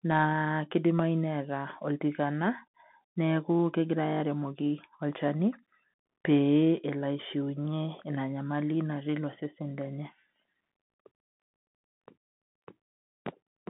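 A speech recording carried end to end over a Bluetooth CVSD headset codec, with plainly audible damage throughout. The audio sits in a telephone band of roughly 150 Hz to 3.4 kHz, the signature of this one-bit delta coder, whose rate fits a 64 kbps link. Its adaptive step lags on loud, bright passages, so s sounds come out scratchy over a grainy hiss. A spectrogram shows a hard ceiling near 3.4 kHz with nothing above, and the waveform carries fine granular noise under the speech.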